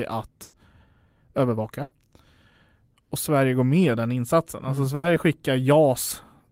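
At 0.43 to 0.59 s the speech is carried on as a held sound that fades for about 100 ms and then jumps ahead. This is a burst of packet loss: the receiver stretched the last sound over the gap, and about 60 ms of speech is gone. From 1.27 to 1.58 s the speech sounds hurried at an unchanged pitch, running about 12 percent fast. This is a jitter buffer speed-up, which trimmed a few tens of milliseconds of pitch periods to shrink an overfull buffer. The same packet-loss burst recurs at 1.82 to 1.96 s and 4.95 to 5.09 s, each with about 90 ms of concealment and 60 ms missing.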